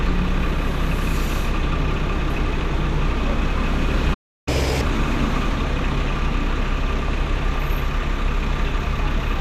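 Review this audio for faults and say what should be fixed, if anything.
Throughout the clip the sound is dull, with a gurgling, granular roughness and upper bands that flicker in and out. This is MP2 compression, likely from Layer II encoding at a rate too low for the material, which fits something around 80 kbps. Too few bits were spread across its 32 sub-bands, so the top ones drop out and the remaining ones are coarsely quantised. Unlike a plain low-pass filter, the treble comes and goes rather than being cut off steadily. To prevent it, encode at a higher bitrate or use a more efficient codec.

From 4.13 to 4.48 s the sound stops dead for about 0.33 s, a playback stall. The player was likely starved of data or its thread was blocked, so output went silent until it recovered. It differs from a dropout because the sound resumes where it left off, with nothing skipped. To prevent it, give the player a deeper buffer and keep its audio thread from being blocked.

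From 4.48 to 4.81 s the sound runs at double speed, with pitch raised by close to ten semitones, then drops back to normal. This is catch-up at higher speed, where the player resamples its backlog to win back the time lost in the stall. Unlike a pitch shift alone, timing and pitch rise together and only briefly. To prevent it, time-stretch without changing pitch, or simply drop the backlog.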